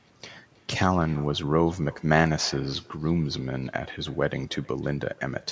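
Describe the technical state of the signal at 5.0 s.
At 5.0 s the speech carries an echo with no canceller, present throughout the clip: the far end's loudspeaker output reaches its microphone and returns unremoved, arriving roughly 300 ms late and about 25 dB below the direct speech as a faint, thin shadow.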